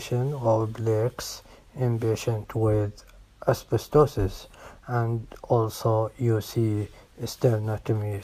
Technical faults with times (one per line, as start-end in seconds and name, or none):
none